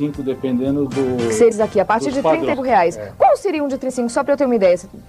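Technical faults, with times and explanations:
1.51 s, 2.52 s and 3.88 s: compressed frames skipped. Whole 26.1 ms frames never get played, so the audio jumps ahead, around 400 ms at the first and about 200 ms and 150 ms at the others, leaving a quick glitch at each join.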